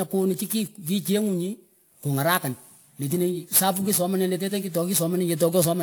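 Throughout the speech there is sample clock jitter: the converter's timing wanders by something like a few microseconds, so each sample lands slightly off its proper instant. The resulting error sits around 20 dB below the signal and follows the waveform's steepness, producing a grainy hiss that thickens on loud, bright sibilants and disappears in pauses. Unlike a steady noise floor or broadband hiss, it never lingers in the silences.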